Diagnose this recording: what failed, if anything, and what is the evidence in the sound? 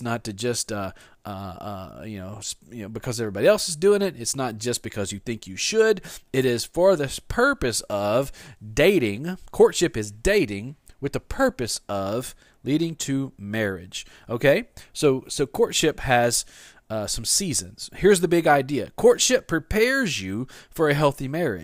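Nothing failed: the speech comes through with no audible defect traceable to any stage of the chain.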